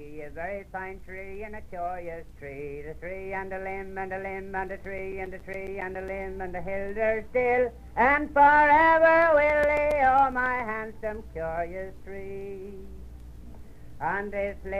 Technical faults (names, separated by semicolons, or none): CD scratch ticks